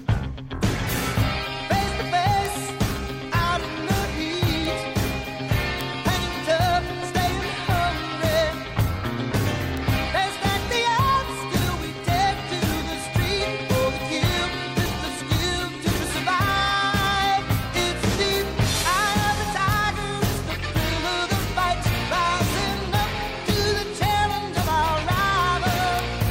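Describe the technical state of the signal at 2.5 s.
A bit error spike sits at 2.46 s, just before the requested moment: a single sample jumps to a peak of about -6 dBFS and drops straight back. A flipped bit in one stored or transmitted sample word makes its value leap by a power of two, independent of the surrounding waveform. Because the disturbance is only one sample wide, its energy spreads across the whole spectrum, and it is heard as one sharp, isolated tick.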